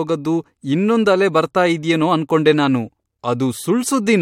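No technical faults can be heard anywhere in this speech recording. The audio holds steady throughout, with no moment that stands out as a fault.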